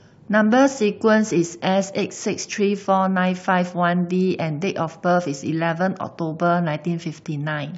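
No technical faults can be heard anywhere in the recording; the signal stays steady and intact throughout.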